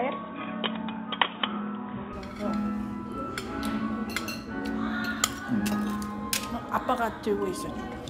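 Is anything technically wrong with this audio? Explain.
Yes. From 0.0 to 2.13 s the sound is band-limited and boxy, with nothing above 3.8 kHz and a new noise floor roughly 30 dB below the signal, then it opens up with no gap and no noticeable level jump. The likely cause is an input switched to a poorer device, a narrower-band microphone or headset path, before returning to the fuller input. A spectrogram shows a flat ceiling at 3.8 kHz ending abruptly at 2.13 s. The waveform shows no break.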